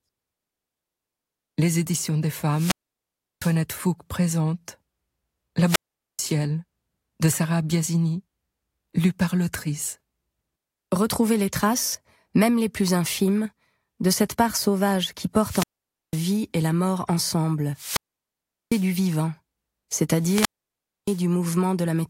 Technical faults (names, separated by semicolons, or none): wireless microphone squelch dropout